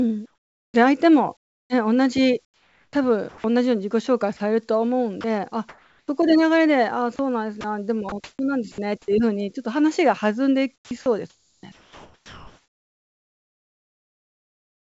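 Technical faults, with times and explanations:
0.26–3.44 s, 5.21–6.08 s, 7.16–8.78 s and 10.76–14.93 s, sound chopped by the voice detector: the sender's voice detector likely kept switching transmission off and on, so about 1.44 s, 0.42 s, 0.3 s and 3.72 s of speech became comfort noise. The speech breaks up.
4.37–4.40 s, sound dropped by the voice detector: the detector likely mistook a quiet moment of speech for background and briefly stopped sending, so about 30 ms was replaced by comfort noise. A short gap of steady noise cuts into the speech before it resumes.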